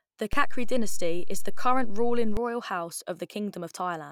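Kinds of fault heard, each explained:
DC step: a low thump at 0.33 s, just before "royal house", and another at 2.37 s, as the waveform's zero line jumps by about -20 dBFS, holds, then steps back.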